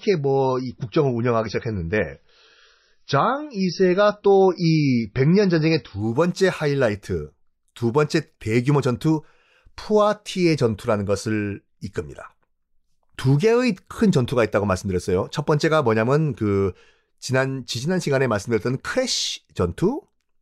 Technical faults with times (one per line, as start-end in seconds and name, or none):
0.00-6.00 adaptive stream starting at a low bitrate